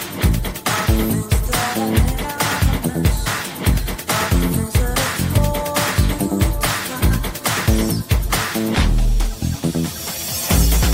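Brief jumps forward at 3.25 s, 5.32 to 5.39 s and 7.01 to 7.04 s: compressed frames skipped, dropping roughly 50, 70 and 50 ms of audio as missing or rejected frames go unplayed.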